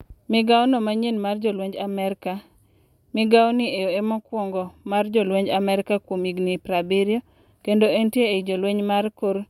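No technical faults are audible.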